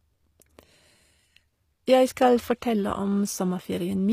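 Speech, with HE-AAC compression damage plainly audible throughout. The treble sounds rebuilt rather than real, with gritty, lispy s sounds and nothing above 15.5 kHz. That points to a low bitrate around 24 kbps, likely from spectral band replication.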